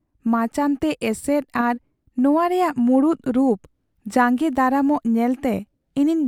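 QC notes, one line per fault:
No faults found, so there are no lines to give.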